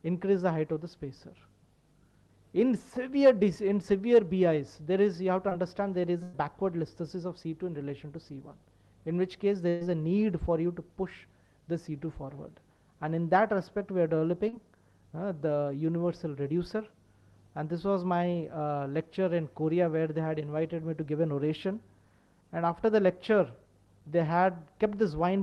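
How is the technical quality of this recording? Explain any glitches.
The recording carries the usual coding texture of a call codec with a high-frequency roll-off near 12 kHz, and it has two kinds of dropout glitches.

Short concealed packet loss, at 5.49 to 5.53 s and 14.49 to 14.55 s: about 20 ms and then 40 ms of audio never reached the decoder in time. The receiver bridged each hole by extending the preceding sound before blending back, which leaves a brief smear or wobble.

Burst of packet loss, at 6.23 to 6.35 s and 9.69 to 9.83 s: roughly 100 ms and 120 ms of consecutive audio went missing. Concealment stretched the last sound across each gap while fading it, giving a held buzz or dying hiss, then the audio jumps ahead.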